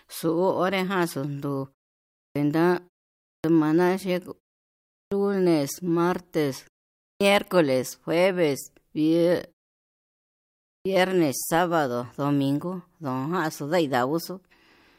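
Five times in this speech the first part of a sound after a pause is swallowed. It happens at 2.26, 3.35, 5.02, 7.11 and 10.75 s, each time after a gap of 0.5 to 1.3 s. That's a clipped start after a pause. The output seems to doze off in the silence and needs about 90 to 105 ms to wake up again. So each phrase pops in abruptly, missing its opening sounds.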